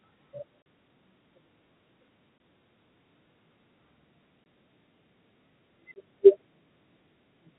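Packet loss filled with silence: packets went missing and the receiver played nothing in their place, cutting hard-edged holes into the speech at 0.63 s (about 40 ms), 2.38 to 2.40, 4.44 to 4.46 and 5.94 to 5.96 s (about 20 ms each), consistent with 20 ms packets, under the band-limited telephone sound of G.711.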